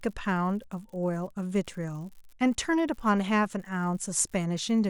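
From start to finish the speech carries an unreliable data bit: one line in the digital path is marginal, so its bit comes out wrong in a random fraction of samples. Each error shifts the sample by the same fixed step, about -38 dBFS, producing a steady crackle or fizz laid over the audio. Because the fault sits in the data path rather than in the signal, the crackle continues unchanged through the pauses between phrases.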